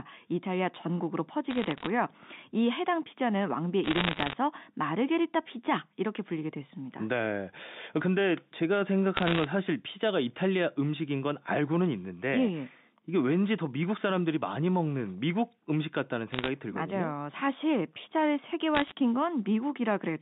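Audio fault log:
1.51–1.87 s, 3.84–4.33 s, 9.14–9.44 s, 16.32–16.48 s and 18.75–18.92 s: bit errors on a digital phone line. Short bursts of sharp ticks and crackle sit over the speech, which stays intact underneath. Each flipped bit corrupts a single logarithmic sample, and hits on the sign or upper bits throw that sample far off its true value. The first burst is lighter, around half a percent of bits in error, and the later four are nearer one percent. The band-limited telephone sound, with nothing audible below roughly 150 Hz or above 3.7 kHz, fits the mu-law line these errors ride on.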